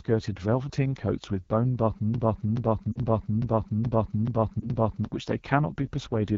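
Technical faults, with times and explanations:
Throughout: AMR wideband (HD Voice) codec. The speech carries a plainly audible rough, raspy grain, with the top band above 6.4 kHz filled by hissy shaped noise rather than true detail. That pattern fits AMR-WB at one of its lowest rates, around 8.85 kbit/s, where the pulse-driven vocal tract model has too few bits. Unlike general lossy smearing or pre-echo, the damage is a buzzy, synthetic texture tied to the speech itself.
2.14 to 5.05 s: broken-record loop. A 0.43 s fragment plays back to back seven times, identical each pass, so the sound stops moving forward for nearly three seconds and whatever should have followed is gone. The likely cause is a stalled player, encoder or stream that kept resending its last held fragment. Unlike a stutter or a single-frame glitch, every repeat is exact and the repeats are long, even and regular.
2.92 to 2.98 s and 4.60 to 4.70 s: lost AMR speech frames. 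Each spot is a brief dip, as the decoder reuses the last good pitch and vocal tract settings at falling gain, and in the two-frame run the sound drops to near silence. The first span covers about 40 ms, which fits two dropped 20 ms frames. The second fits a single dropped frame. Both sit inside the loop. They differ from the loop because they are momentary fades, not exact repeats.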